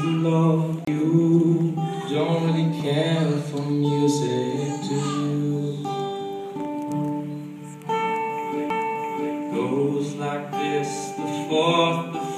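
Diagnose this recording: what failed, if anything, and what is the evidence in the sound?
CD skips at 0.85 to 0.87 s and at 8.70 s point to a fault at the playback stage. Each is heard as a tick with a brief mute, roughly 30 ms at the first and only a few milliseconds at the second, after which the audio resumes from a different place rather than continuing smoothly. A knock or a flaw on the disc made the laser lose its track and land on another turn of the spiral, so the player muted briefly and resumed from there.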